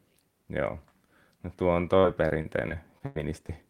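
A short speech recording that goes choppy right after "tuo on": from about 1.99 s to 3.51 s there's repeated packet loss. Seven separate holes open up, the longest around 96 ms, and each gets papered over by stretching the last bit of sound, roughly 240 ms of fill in all, about 16% of that stretch, so you hear chunks missing and smeared.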